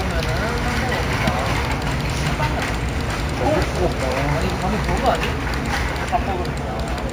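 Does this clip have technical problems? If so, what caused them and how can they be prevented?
Yes. Throughout the clip the top end sounds dulled, with a faint metallic shimmer riding above it. This is imaging from linear upsampling: straight-line interpolation left mirrored copies of the spectrum at 8 to 16 kHz, roughly 25 dB below the signal, which fits a 16 kHz source raised to 48 kHz. To prevent it, resample with a proper band-limited, steep low-pass filter instead of linear interpolation.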